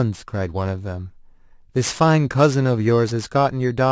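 Aliasing runs through the whole speech clip. The sample rate appears to have been lowered from 24 kHz to 16 kHz without an anti-alias filter, so energy above 8 kHz folds back down into the band, around 20 dB below the signal. Sibilants turn gritty and metallic.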